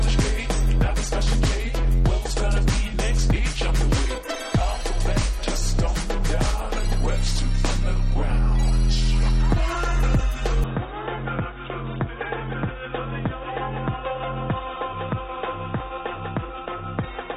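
At 10.64 s the sound suddenly goes dull and boxy and stays that way to the end, with no gap at the changeover. Everything above about 3.8 kHz is gone, the level drops by roughly 10 dB, and a faint new background noise sits well under the signal. That points to an input switched to a poorer device, likely a different mic or a headset's call profile taking over mid-recording and passing a much narrower band.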